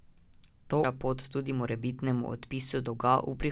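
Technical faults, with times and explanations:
0.84–0.86 s, skip ahead: the sound jumps forward abruptly with no gap filling it, and roughly 400 ms of audio is simply gone. The two sides are butted together almost directly, so it sounds like a clean splice rather than a dropout. Later audio was already queued, and a chunk was thrown away in transit or when the jitter buffer overflowed, which also knocked about 400 ms off the delay in one go.
2.77–3.43 s, jitter buffer speed-up: this stretch plays about 16% fast while the pitch stays put, so it comes across as a bit rushed. The buffer was sitting on more audio than it wanted, and the receiver trimmed short slices of one or a few pitch periods over and over to drain it, about a tenth of a second in total. The band-limited sound of the call path, with nothing above 4 kHz, carries on underneath it.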